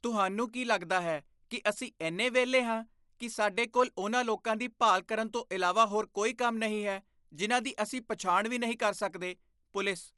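Dolby Digital compression damage runs throughout this speech clip and is plainly audible. Nothing reaches above about 11.4 kHz, so the sound is dull and lacks its upper air, and there is a rough, fluttering noise around voiced tones. That pattern is likely an AC-3-style encoder starved of bits, consistent with roughly 64 kbps. It narrowed the band, left many frequency lines without mantissa bits, and let the decoder fill them with dither noise.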